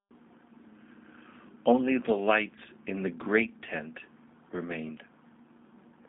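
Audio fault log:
throughout, G.729 codec: the speech sits in a 150 Hz to 3.6 kHz telephone band with nothing above 3.7 kHz. It has a plainly audible rough, synthetic edge because each 10 ms frame is rebuilt from a filter, pitch predictor and sparse pulses, which fits an 8 kbit/s G.729A stream.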